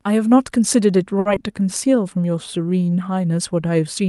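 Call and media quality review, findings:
Short stall from a late packet, 1.19–1.27 s: sound held too long, no content lost. Jitter buffer ran dry waiting for a late packet; roughly 60 ms stretched from the last sound, playout delay up about 60 ms afterward.

Short concealed packet loss, 1.35–1.38 s: brief smear, a short sound can drop out. About 20 ms never reached the Opus decoder in time. Concealment synthesized continuation and blended back into real audio shortly after the stall.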